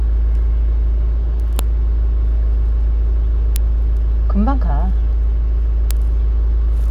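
Three sharp, loud snaps land at 1.59 s, 3.56 s and 5.91 s, and they're a case of a file header played as audio. Separate WAV pieces got stitched together without stripping their headers, so each join starts with a few dozen bytes of header data being read as samples. That garbage comes out as a brief, hard click that cuts right through whatever the sound is doing at that moment.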